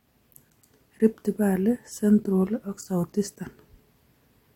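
No technical faults are audible anywhere in this speech recording.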